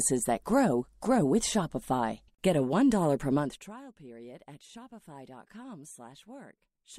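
A speech clip with zipper noise from 3.37 to 3.74 s, just before "period at": the level drops roughly 20 dB in unsmoothed 1 dB steps, about a hundred a second, so a fine ticking rides the fade. A waveform shows a staircase envelope, a spectrogram evenly spaced faint vertical lines.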